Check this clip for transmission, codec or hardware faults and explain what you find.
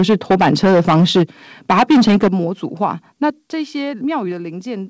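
Two problems stand out: the speech is clipping at the start, and then the input level drops twice in sudden steps.

From 0.00 to 1.23 s and again from 1.69 to 2.28 s there's microphone overload, likely from the mic input being set too hot. Peaks run about 10 and 11 dB past the converter's limit, squaring off roughly a sixth and then a third of the samples, so loud syllables get a harsh, crackly edge.

At 2.28 s, right as that second overload ends, and again at 3.30 s, you hear the microphone volume stepped down, likely the call software cutting the device gain after detecting clipping. Speech and background both drop together, by about 9 dB and then about 6 dB.

Through the call path there's nothing above 8 kHz, which fits G.722 at 64 kbps.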